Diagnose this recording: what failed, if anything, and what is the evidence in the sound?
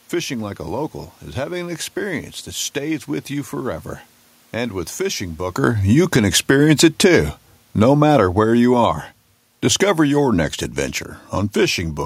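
Automatic gain falling in the call processing stage: the gain control judged the input too loud or its background noise too strong and eased its gain down by about 6 dB between 5.56 s and 9.02 s. The speech and the room noise behind it sink together, which a talker shifting position just before does not explain.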